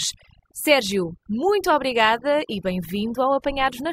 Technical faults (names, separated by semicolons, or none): overdone noise removal